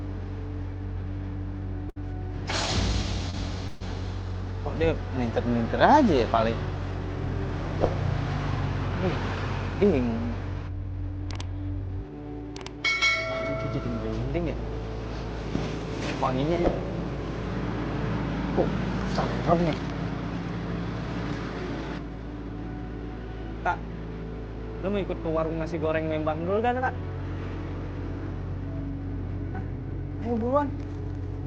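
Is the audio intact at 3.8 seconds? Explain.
No. A call audio freeze runs from 3.67 to 3.83 s. Packets were likely delayed and the jitter buffer emptied. The last sound is stretched into a fading buzz for about 131 ms. The audio then resumes where it stopped, running that much later, with nothing lost.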